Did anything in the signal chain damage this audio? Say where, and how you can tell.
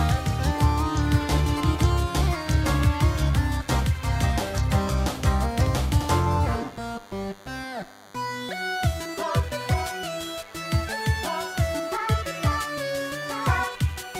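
Yes. The damage is in the analogue wiring, and it runs for the whole clip. A steady, thin buzz sits under the sound at 100 Hz, with a dense stack of harmonics above it. It stays roughly 25 dB below the programme. This is DECT cordless phone buzz. A nearby DECT handset or base sends a radio burst every 10 ms. An input stage rectifies those bursts, turning the 100 Hz repetition into audible noise.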